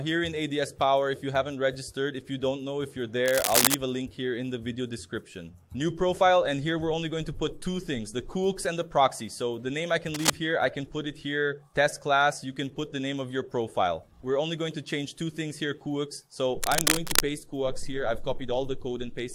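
A worn cable, connector or control was likely being moved, its contact resistance jumping erratically and producing cable scratch noise: uneven rustling bursts at 3.26–3.75 s (louder than the sound), 10.14–10.33 s and 16.62–17.20 s (both roughly level with it).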